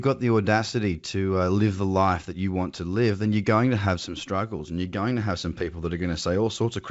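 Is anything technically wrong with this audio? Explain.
No, nothing here is technically wrong.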